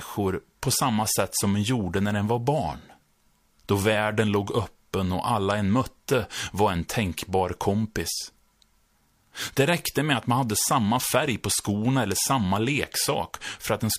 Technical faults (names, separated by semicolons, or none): none